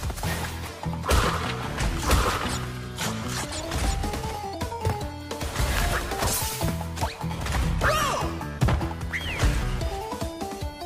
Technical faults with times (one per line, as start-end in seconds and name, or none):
none